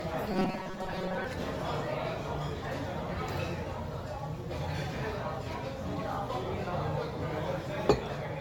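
Throughout, the sound is swirly, smeared and hollow with nothing above 17 kHz, likely generation loss from about seven AAC passes at around 96 kbit/s.

From 0.32 to 1.24 s, robotic sound from repeated short buffers sets in: a rigid 188 Hz buzz, likely from the last 5.3 ms being repeated in place of most of the real audio.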